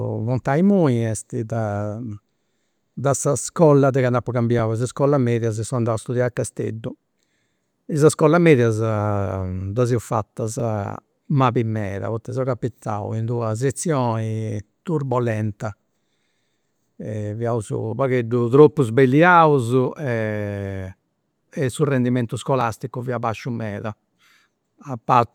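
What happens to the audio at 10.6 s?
Overlapping chunks at 10.60 s: the speech was handled in 6.0 s blocks, and this block begins before the previous one finished. About 6.5 ms of audio plays twice at the join, heard as a brief click or tiny stutter.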